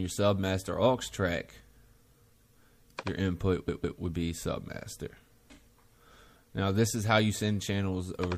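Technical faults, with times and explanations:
Throughout: MP3 compression. The audio has a watery, swirling quality, with the top end cut off and faint detail flickering in and out. This is likely the work of an MP3 encoder short of bits, which points to a bitrate around 64 kbps. At that rate the encoder drops the treble above a fixed frequency and zeroes weak frequency lines, and because those lines change from frame to frame the texture shimmers audibly.
3.67 to 3.99 s: repeated frames. A slice of about 157 ms plays three times in a row, heard as a stutter where the sound jumps back and restarts twice before moving on. The same stretch of compressed data reached the decoder more than once, and the decoder simply played each copy. The two extra passes add about 0.31 s to the clip.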